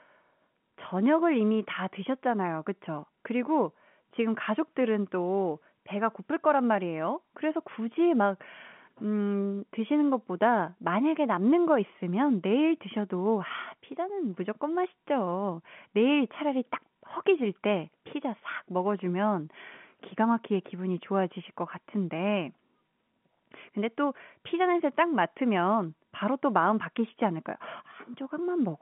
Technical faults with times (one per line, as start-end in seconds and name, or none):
none